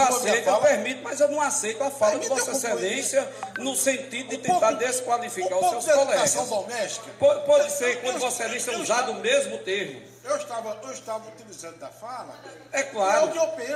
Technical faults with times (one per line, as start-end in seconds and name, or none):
none